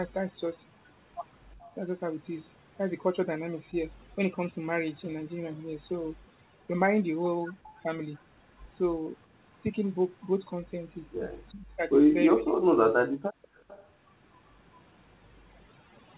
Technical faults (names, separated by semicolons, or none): overdone noise removal; echo leak; speech suppressed in double talk; background gated by the echo canceller